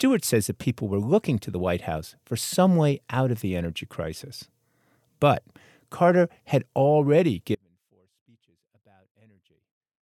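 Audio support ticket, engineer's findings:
Audio dropout to a faint residue, 7.55 s to end of clip, right after "had already". Abrupt cut, not a fade. Gap carries only faint sound, roughly 35 dB under signal. Likely upstream signal loss while downstream path stayed live.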